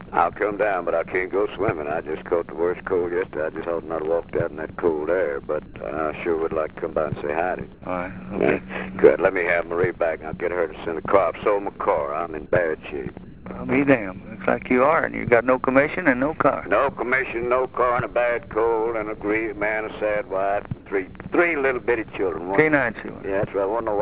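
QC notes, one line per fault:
5.66–5.74 s, 7.74–7.82 s and 13.24–13.46 s, comfort noise in place of the background: in pauses where the background sits about 21 to 24 dB below the loud passages, the real background is replaced for 80 ms, 80 ms and 220 ms by steady, featureless noise. The level holds at the first, drops about 7 dB at the second and about 3 dB at the third. The likely cause is discontinuous transmission: the sender stopped sending in silence and the receiver synthesised shaped noise, band-limited like everything else here to below 4 kHz.
14.24–14.26 s, sound dropped by the voice detector: 20 ms of actual sound is lost and steady noise sits in its place, then the signal resumes. The sender's voice detector likely judged this stretch to be background and stopped sending, and the receiver filled the gap with comfort noise until detection triggered again.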